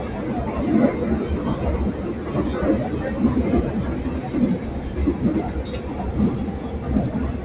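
Throughout the clip, a noise suppressor applied to music or sounds keeps mistaking steady tones and ambience for background noise and pulling them down, by roughly 5 dB at its deepest. Onsets slip through intact, but sustained parts and decaying tails sag and flutter, so the sound seems to breathe. Unlike a compressor's pumping, the dips follow how steady the sound is, not how loud. Unlike packet loss, nothing drops out completely. The band stops near 4 kHz, as a narrowband telephone codec would leave it.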